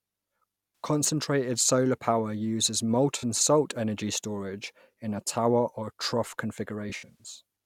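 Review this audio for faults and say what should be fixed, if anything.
AAC frame loss with concealment at 0.84 s, 3.18–3.24 s and 6.89–7.27 s: lost frames are patched from the last good spectrum, giving smeared, phasey fill rather than the clean silence of a plain dropout. The last stretch is scattered, with runs up to about a tenth of a second. Protect the stream with error-resilient AAC or forward error correction, or retransmit lost packets.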